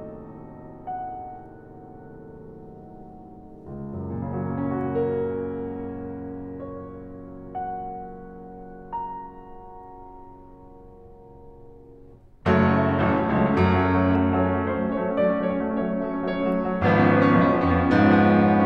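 From 14.15 to 16.02 s the music sounds hollow and phasey. This is channel delay (comb filtering): one channel lags roughly a tenth of a millisecond, cancelling treble near 5 kHz.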